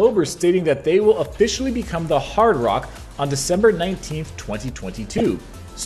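A short burst of corrupt frame decoded sound appears from 5.14 to 5.21 s. It lasts about 70 ms and peaks around -5 dBFS. A few consecutive compressed frames carried flipped bits, and the decoder played them anyway. Misread gains and codes scattered energy into wrong frequencies, producing a chirp, squeak, blip or burst of noise.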